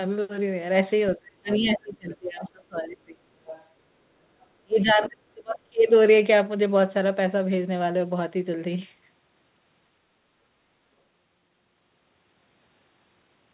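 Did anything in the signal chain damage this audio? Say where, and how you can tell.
Yes. Speech sinks by about 30 dB from 1.16 to 3.34 s and 4.64 to 5.84 s. This is speech suppressed in double talk, likely the call's echo canceller turning both talkers down.

A faint second voice leaks in at 1.51–1.75, 2.41–2.49, 3.45–3.64 and 4.89–4.93 s, some 15 to 25 dB below the speech. This is the other side's voice leaking through, likely loudspeaker echo the canceller left behind.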